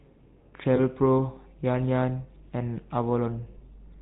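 Throughout, the speech carries the buzzy, gravelly grain of the GSM full-rate codec, and the damage is plainly audible. The coder rebuilds the voice from a vocal-tract model excited by evenly spaced pulses, so fine detail between pulses is lost and nothing reaches above 4 kHz. That combination of hard band-limiting and rasping texture, rather than the watery swirl of a modern low-bitrate codec, fits the 13 kbps full-rate coder.

From 0.76 to 0.80 s, lost GSM frames cause a brief defect. About 20 ms of signal went missing, a single frame, and the decoder filled it by repeating the last good frame's parameters. The result is a short, rough metallic ring held in place of the sound. It differs from a plain dropout because there is no silent gap, just that frozen, tinny smear for an instant before normal decoding resumes.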